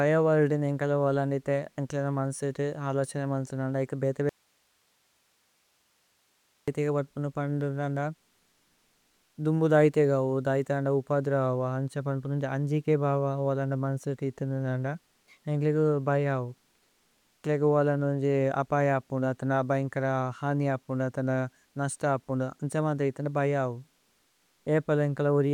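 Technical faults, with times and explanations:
4.29–6.68 s, audio dropout to a faint residue: after "മന്സേതു നന്ദ ഏക് ബേതേ" the speech cuts abruptly to hiss about 45 dB down until "വത്പുന പന്പുന നന്ദ", likely lost signal on a still-live line.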